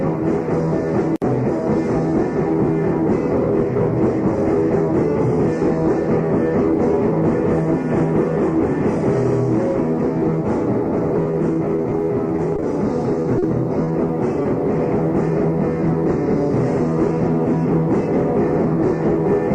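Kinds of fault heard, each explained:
Repeated packet loss (robotic sound): audio packets kept going missing or arriving late, and each hole was patched by extending the sound just before it. Between 11.2 and 14.5 s, brief gaps of up to 40 ms recur rapidly, leaving choppy, robotic-sounding stretches with fragments dropped.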